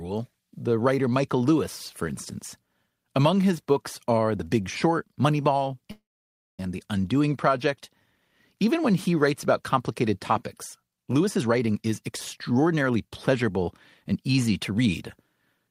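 At 5.91 to 6.60 s a call audio freeze stretches the last sound into a brief buzz, then about 590 ms of flat waveform and blank spectrogram. Delayed packets likely emptied the jitter buffer, and speech resumes intact.

After "writes about complicated topics", from 11.21 to 15.02 s, a jitter buffer speed-up trims pitch-period slices, running speech 117% fast at unchanged pitch. The spectrogram shows compressed syllables, about 0.7 s shorter overall.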